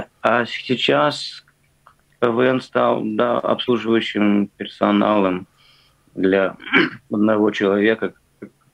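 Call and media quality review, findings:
Glitch at 3.65–3.69 s, about 40 ms: damaged data in a compressed stream. Decoder misreads corrupt frames, resyncs. Spectrogram shows a brief disturbance; waveform shows an abrupt discontinuity.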